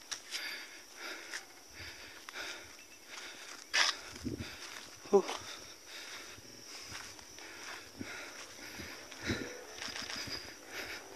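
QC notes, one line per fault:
1.49–1.63 s, repeated frames: a 69.7 ms block plays twice more, adding 139.3 ms; the restarts stutter.
2.90–3.02 s, repeated frames: a 116.1 ms block replays once, adding 116.1 ms, giving a single stutter.
6.48–6.62 s, repeated frames: a short 46.4 ms block plays three extra times, adding 139.3 ms, a rapid triple stutter.
9.89–10.17 s, repeated frames: a 139.3 ms block plays twice more, adding 278.6 ms, a longer audible loop.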